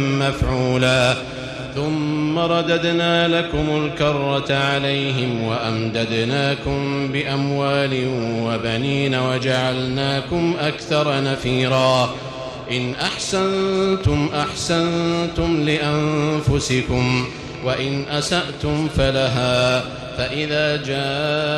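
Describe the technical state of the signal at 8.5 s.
At 8.5 s the signal is intact, with no dropout, distortion, glitch or other technical fault to be heard.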